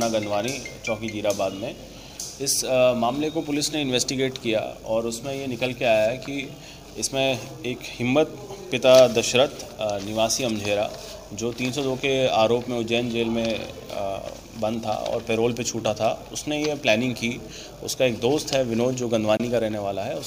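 A gap at a join of encoded pieces opens at 19.37 s and lasts until 19.40 s, a silence of about 25 ms cut into otherwise continuous sound. The audio was encoded as separate pieces and joined without trimming, so the encoder's start-up delay and the padding of the last frame both remain as dead air. The edges of the dropout are smeared by the codec, and the sound resumes exactly where it stopped.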